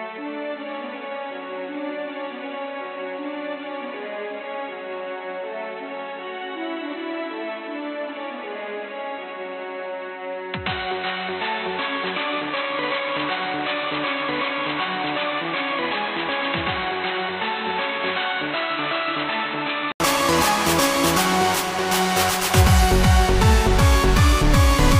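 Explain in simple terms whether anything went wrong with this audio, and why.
For the first 20 seconds the audio sounds dull and boxy, with nothing above about 4.1 kHz, a bit quieter overall and with a different background. At 20 s, after a brief 80 ms gap, it suddenly clears. That gap and the background change point to an input switched to a poorer device, likely, rather than simple muffling.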